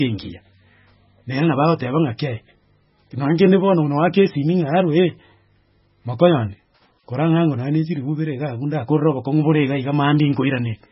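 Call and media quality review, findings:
Watery, swirling speech throughout; s sounds metallic and chirpy, no content above 5.5 kHz, consonant onsets smeared. Likely heavy MP3 compression, consistent with roughly 16 kbps: encoder cuts treble at fixed frequency, drops weak spectral lines that flicker frame to frame.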